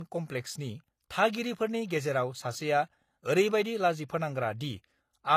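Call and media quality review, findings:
Low-bitrate audio saved at a high bitrate, throughout the speech. Band empty above 14.9 kHz. Artefacts of a low-rate encoder, consistent with something like HE-AAC around 24 kbit/s. Likely cause: that stream re-encoded to high-rate MP3, in the region of 256 kbit/s. Second pass adds size only. Cannot restore removed detail. Fix upstream: obtain the original, not the transcode.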